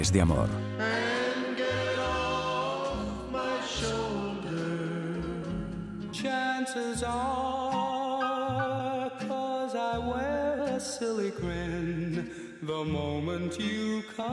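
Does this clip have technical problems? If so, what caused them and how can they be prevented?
No, this clip has no technical problems, so there is nothing to prevent.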